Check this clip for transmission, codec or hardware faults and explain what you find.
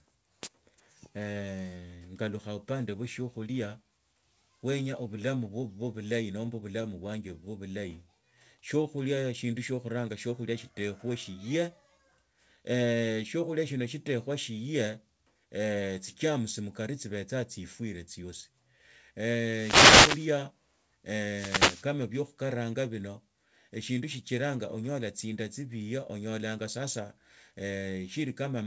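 Four kinds of fault occur in this speech clip, heard through a G.722-style call path whose band stops at 8 kHz.

Scattered short gaps, 6.46 to 7.93 s: roughly seven packets were lost or late, and the receiver filled each hole by extending the preceding sound. Together these fills total about a tenth of a second, the longest about 20 ms, heard as brief ticks and smears.

Jitter buffer slow-down, 8.15 to 9.76 s: the buffer was short of reserve, so the receiver repeated pitch periods, adding 87 ms. The speech runs at 95% speed with unchanged pitch, sounding drawn out.

Jitter buffer speed-up, 11.82 to 12.71 s: the buffer held too much audio, so short pitch-period pieces were cut, about 70 ms in all. The speech runs at 108% speed with unchanged pitch and sounds hurried.

Wireless microphone noise hit, 19.40 to 20.43 s and 21.29 to 21.87 s: the FM radio link faded as reflections cancelled, letting receiver noise rise. 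Each is a swish or burst of static over the speech, the second ending just before "bio khukaranga bino egindu".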